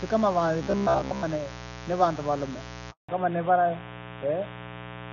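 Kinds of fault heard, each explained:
Mains buzz: A steady, raspy 60 Hz buzz runs under the whole clip, sitting only about 15 dB below the speech. Sharp switching spikes, twice per mains cycle, get into the signal path and add harmonics reaching up to several kilohertz. Unlike a pure hum, which is a soft low drone, this is edgy and gritty. Unlike the robotic stretch, its pitch never moves with the speech and never stops.
Robotic sound from repeated short buffers: From 0.63 to 1.24 s the speech turns rigid and metallic, locked onto a buzz near 67 Hz while still loosely tracking the phrasing. The likely cause is audio arriving too seldom, so the software loops the last buffer of about 15 ms and covers most of this stretch with repeats, skipping the real audio. Unlike the mains buzz, it is confined to this span and rides on the speech itself.
Handover gap: At 2.91 s the speech fades out within a few tens of milliseconds and stays silent for 180 ms, until 3.09 s. 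This fits the call being moved from one network to another with no speech frames arriving during the switch, so whatever was said in that moment is simply lost. Unlike a dropout from packet loss, it is a single clean silence, and the sound that comes back is altered.
Fallback to narrowband: From 3.09 s to the end, everything above 4 kHz is gone, and the speech sounds duller and rougher than before. The call has dropped from the HD Voice wideband codec, which before the gap carried clear speech with extended high end, to an older narrowband codec. Unlike a gradual muffling, the change is an abrupt shift in bandwidth right after the handover silence, and the voice stays band-limited for the rest of the clip.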